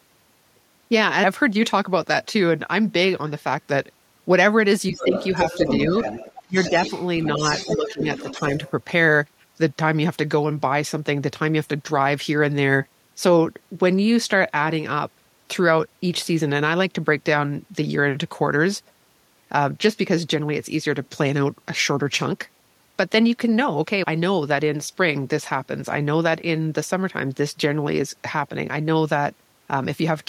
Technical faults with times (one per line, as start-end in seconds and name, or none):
4.92-5.15 speech suppressed in double talk
4.97-8.71 other side's voice leaking through
6.46-6.73 speech suppressed in double talk
7.38-7.42 speech suppressed in double talk
7.76-8.01 speech suppressed in double talk
8.32-8.38 speech suppressed in double talk